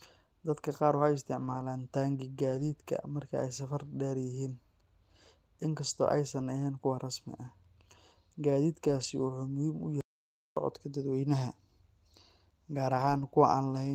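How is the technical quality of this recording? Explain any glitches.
The recording is speech with two kinds of glitches: repeated brief roughness from packet loss and one full dropout to silence.

Lost packets rebuilt from error correction occur at 1.35–1.61 s, 2.51–2.69 s (just before "marka ay safar dheer"), 3.85 s (after "marka ay safar"), 6.39 s, 8.87–9.05 s and 12.93–13.23 s. The decoder fills each loss with a low-bitrate backup copy, so the sound stays continuous but turns briefly rougher and noisier.

An audio dropout to silence runs from 10.01 to 10.57 s, about 0.56 s of total silence with no room tone. The likely cause is a lost input feed.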